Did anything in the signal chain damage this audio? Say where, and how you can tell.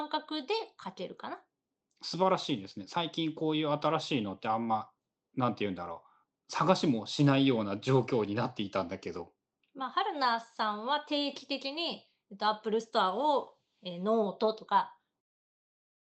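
No, nothing in the chain damaged this speech: it has the ordinary character of a call codec path with the band topping out around 8 kHz, and the level eases smoothly away from roughly 15 s to 15.22 s as a deliberate edit rather than a defect.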